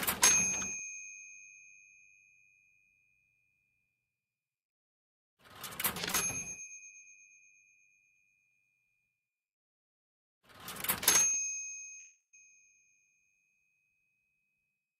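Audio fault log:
6.11–6.15 s, short concealed packet loss: a brief smear where about 20 ms of sound was missing and was patched by extending what came before, too short to leave a gap.
11.99–12.35 s, long network dropout: about 340 ms of sound is gone, a fading continuation sliding into roughly 120 ms of silence, likely lost network audio rather than a momentary glitch.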